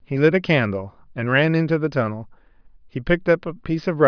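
No technical faults can be heard at any point in the speech, so there is nothing to describe in time order.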